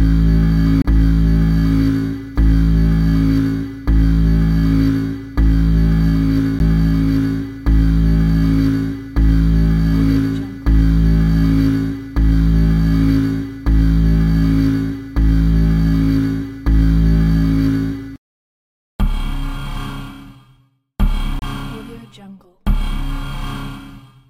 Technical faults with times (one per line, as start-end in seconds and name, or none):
0.82-0.85 CD skip
6.59 CD skip
21.39-21.42 CD skip